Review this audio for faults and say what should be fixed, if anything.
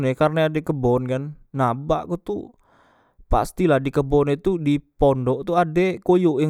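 Nothing to fix: no faults are audible anywhere in the speech.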